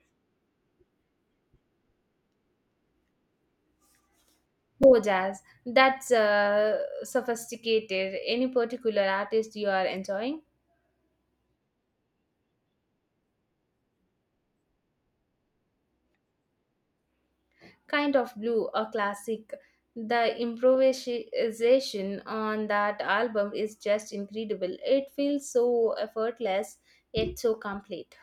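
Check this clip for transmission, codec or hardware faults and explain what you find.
One fault is present. At 4.83 s there is a repeated buffer: new audio arrived late, so the device replayed its last 5 ms block once, which sounds as a brief click in the speech.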